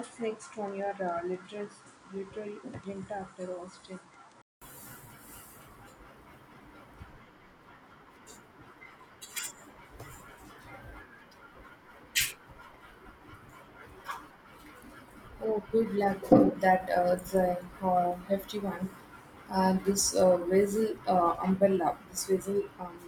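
Speech that opens dull and slightly quieter, about 5 dB down, with nothing above 10.5 kHz and a faint new noise floor, until a 200 ms silence at 4.62 s; likely an input switched to a poorer device.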